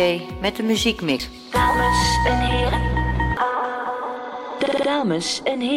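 A CD skip at 1.19 s: a brief tick and a few milliseconds of silence, then the audio resumes elsewhere on the disc, a jump rather than a dropout resuming in place.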